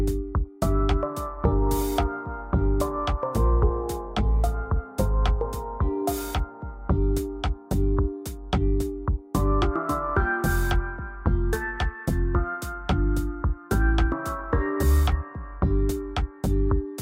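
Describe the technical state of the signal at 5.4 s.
At 5.4 s the signal is intact, with no technical fault present at that moment.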